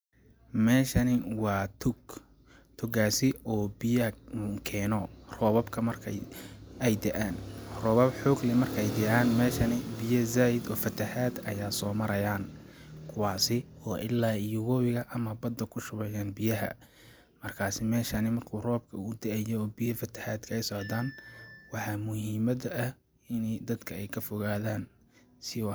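Nothing goes wrong anywhere in this speech recording, so there's no fault to point to at any moment.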